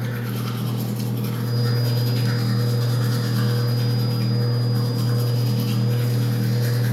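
In this recording of everyday sound, a thin, steady feedback whistle near 4.9 kHz enters at 1.39 s and persists to the end, swelling and fading slowly in level and sitting roughly 20 dB beneath the sound. The likely cause is a loudspeaker-to-microphone loop held just at the edge of feedback.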